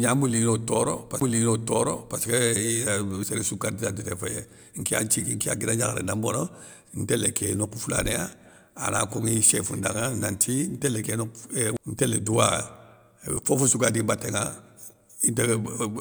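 At 1.2 s, a CD skip: the laser jumps to another turn of the disc spiral, so the player mutes very briefly and resumes elsewhere, heard as a tick and a sudden jump in the speech. A second, even shorter skip comes at 11.77 s.

Compressed frames skipped occurs at 3.23 s before "séréssou kardidantité", 5.40 s before "ya guida gnakharé na", 6.62 s, 8.99 s, 11.04 s and 13.37 s before "fofossou gadi". Missing or rejected frames are never decoded. The speech leaps forward by 10 to 20 ms, about 70 ms at 6.62 s.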